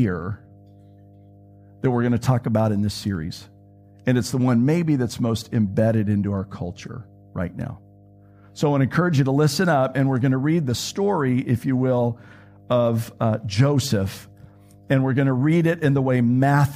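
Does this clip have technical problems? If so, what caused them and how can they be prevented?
Yes. There's mains hum running underneath the speech for the whole clip, a steady low tone at 50 Hz sitting somewhere around 30 dB below the speech. It's not loud. That's the power line leaking into the signal, most likely through a ground loop between connected gear or from a transformer sitting close to a cable or mic. To prevent it, keep all equipment on a single grounded outlet, use balanced cables, and route audio lines away from power supplies.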